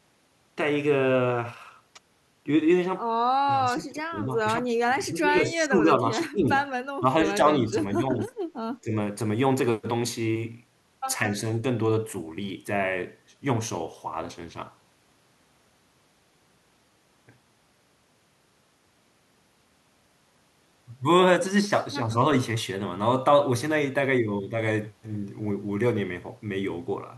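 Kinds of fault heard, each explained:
speech suppressed in double talk: Between about 3.5 and 8.9 s the speech repeatedly sinks in seven separate dips, the longest running from 4.59 to 5.86 s. The early ones drop by roughly 15 dB, and the later, shorter ones near 7.7, 8.0 and 8.9 s are milder. The likely cause is an echo canceller facing simultaneous far-end talk, mistaking this talker for loudspeaker echo and turning the level down.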